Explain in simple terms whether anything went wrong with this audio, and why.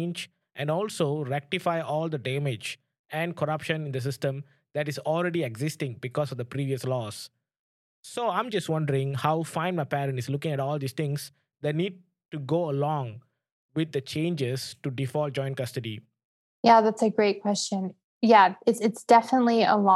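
Nothing went wrong: the speech recording comes across as a steady, unbroken signal with no technical problems audible anywhere in it.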